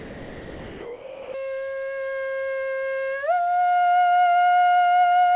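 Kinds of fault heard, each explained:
Sound dropped by the voice detector: steady hiss replaces the music until 1.34 s, likely detector-gated as background; a dropout would leave silence, not noise.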